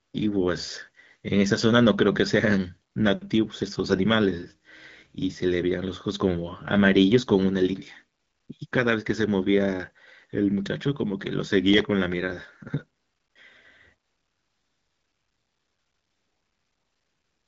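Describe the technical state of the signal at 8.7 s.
At 8.67 to 8.71 s there is a brief burst of AMR comfort noise, lasting about 40 ms. The sending phone treated this instant as a pause and stopped transmitting speech frames, so the receiver filled the gap with synthetic noise built from a rough estimate of the background's level and spectral shape. The real background drops out and a smooth, featureless hiss takes its place. That even noise is what separates it from a packet-loss dropout, which would leave silence or a smeared repeat of the preceding sound. Around it the wideband signal sounds clean, which fits AMR-WB running at 12.65 kbit/s.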